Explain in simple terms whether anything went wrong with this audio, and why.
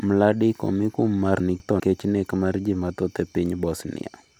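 Between 1.4 and 1.8 s, just after "omi kum mar" and before "nek mar ji mathoth", the speech briefly sounds jumbled. These are chunks out of order: one 200 ms piece arrived a chunk late and played after the next piece, leaving three abrupt joins.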